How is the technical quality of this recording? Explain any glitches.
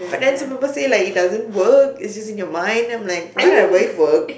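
No glitches can be heard anywhere in this speech recording. There is nothing in it that calls for an explanation.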